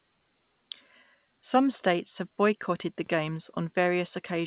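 Nothing goes wrong anywhere in the speech here, and the only thing worth noticing is the call path itself, where nothing comes through above 4 kHz, which is just what you'd expect from a narrowband phone codec like G.711 A-law.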